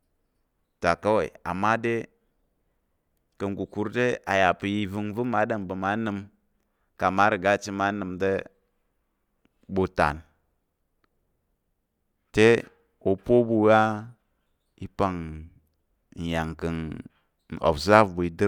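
No technical faults can be heard anywhere in the speech.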